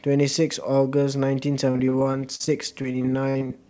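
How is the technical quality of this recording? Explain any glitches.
The recording has one clear glitch in the later part of the speech. From about 1.66 s to 3.52 s it turns choppy and robotic, with short pieces dropping out. This is repeated packet loss. Audio packets kept going missing or arriving late, and each hole was papered over by stretching the preceding sound. The gaps are brief, the longest about 47 ms, but about a fifth of that stretch is filled-in sound, which gives the choppy, robotic quality. Throughout, the sound stops at 8 kHz, which fits a wideband call codec such as G.722.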